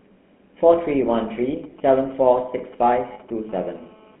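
Speech runs through the GSM full-rate codec for its whole length, band-limited to about 200 Hz–3.4 kHz, with a plainly buzzy, gravelly roughness that fits the 13 kbit/s codec rather than plain narrowband filtering. From 1.64 to 3.30 s, GSM signalling bursts add faint galloping ticks and short 217 Hz buzzes, roughly 25 dB down, broken into groups rather than continuous. At 3.14–3.19 s, lost GSM frames hold the sound for 40 ms as a metallic ring, fitting two concealed frames, not a dropout to silence. From 3.49 to 4.16 s, GSM phone buzz sits as a steady, raspy 217 Hz tone with harmonics, about 30 dB below the speech, unbroken as during a call.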